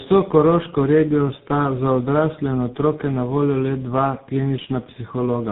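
Throughout, the speech shows tandem speech coding: several codecs in a row, likely ending at GSM full rate, each re-coding the last one's degraded output, leaving rough, muffled, warbly audio with nothing above 3.7 kHz.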